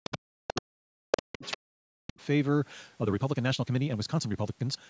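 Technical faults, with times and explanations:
0.00–2.2 s, speech suppressed in double talk: the talker's speech dips by up to about 40 dB while both sides overlap, likely the echo canceller muting everything it couldn't separate.
0.04, 0.48, 1.12, 1.43 and 2.21 s, other side's voice leaking through: short scraps of a second voice, from barely audible to as loud as the talker, likely residual loudspeaker echo.
2.96–4.89 s, time-stretched section: pace jumps to 1.8 times speed with unchanged pitch and sounds rushed, likely from pitch-preserving time compression dropping short segments.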